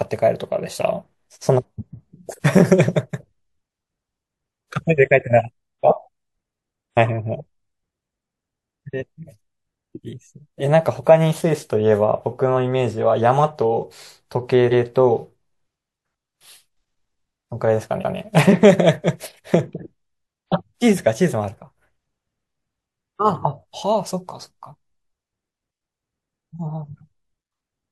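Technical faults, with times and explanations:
14.70 s and 18.00 s, repeated frames: a 139 ms block plays twice in a row, fitting a three-frame run resent, so it sounds like an exact-copy stutter rather than a fading echo.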